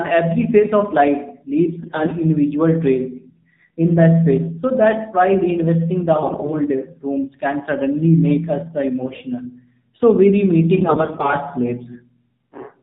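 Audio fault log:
throughout AMR narrowband mobile codec: the speech is cut off above 4 kHz and sounds buzzy and synthetic, as a sparse pulse-driven vocal-tract model would at a low rate near 7.4 kbps.
1.80–2.15 s, 6.16–6.59 s, 9.06–9.25 s, 10.76–11.34 s AMR bit errors: corrupted low-priority bits misplace excitation pulses and skew pitch, gain and spectral detail, so the voice turns hoarse and gargly. The last burst is roughest.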